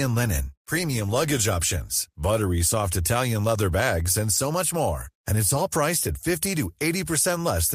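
No technical faults can be heard in this recording.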